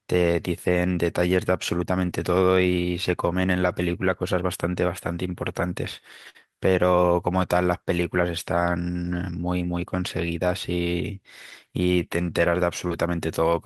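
At 2.05 to 2.11 s, two lost packets are rebuilt from error correction. The next packet carried a low-bitrate copy, and the decoder played it. There is no gap, but 40 ms of speech turns rougher and noisier. The same happens at 3.61 to 3.71 s, this time over 60 ms, which fits about three 20 ms packets. Each patch sounds grainy rather than silent.

From 6.29 to 6.48 s comes a burst of packet loss. No copy arrived. The receiver held the last sound for about 51 ms, letting it decay into a buzz or hiss. Then the speech jumps ahead. About 60 ms of real audio is gone, and 14 ms of extra fill stretches the timing. It sounds like a brief stall followed by a skip.

More rebuilt packets follow. At 9.04 to 9.14 s, 60 ms is recovered from error correction and sounds coarse and noisy. At 11.50 to 11.52 s, a single 20 ms frame is patched the same way, a short rough grain.

At 12.88 to 12.92 s there is a short concealed packet loss. 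About 20 ms never arrived in time. The receiver extended the previous sound for roughly 23 ms and blended back in, leaving a small smear or wobble. Inside that window, at 12.90 to 12.92 s, another 20 ms frame is rebuilt from error correction. This adds a touch of roughness as the real audio resumes.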